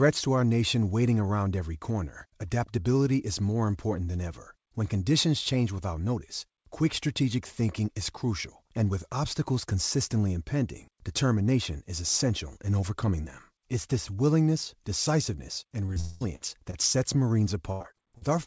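At 15.86 and 15.94 s the speech shows two short concealed packet losses, each about 20 ms of audio that arrived too late to decode. The receiver bridged each hole by extending the preceding sound and cross-fading back, so each is a brief smear or wobble. On a spectrogram the harmonics run unnaturally flat for 20 ms; the waveform shows a slightly too-regular patch rather than a gap.

From 16.00 to 16.25 s there is a quarter-second stretch where the sound turns into a held buzz or hiss that fades out, and it returns with about 200 ms of material missing, jumping ahead. This is likely a long network dropout, the stream stopping and the receiver synthesising around 0.2 s to cover it. The spectrogram shows frozen, decaying harmonic bands; the waveform envelope tapers smoothly instead of following syllables.

At 16.36 to 16.43 s comes a burst of packet loss: about 60 ms lost in a row, covered by roughly 50 ms of continued, steadily attenuated sound before real audio resumes further on. 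It is heard as a short held buzz or fading hiss with a skip. Two more short concealed losses follow at 16.71 and 16.93 s, again about 20 ms each, the second patched with only about 12 ms of fill.

From 17.72 to 18.23 s repeated packet loss gives a choppy, robotic quality. Four separate holes, the longest about 84 ms, mean roughly 30% of this half-second is synthetic. The spectrogram shows repeated blocks of smeared, stretched harmonics alternating with normal texture; the waveform has a stuttering, segmented envelope. Throughout, the call path's G.722 band limit leaves nothing above 8 kHz.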